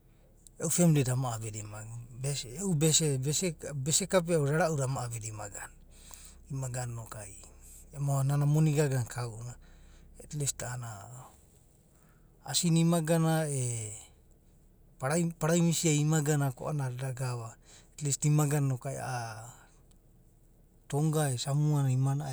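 Nothing in this speech recording stands out as a technical fault at any point, so there's nothing to flag here.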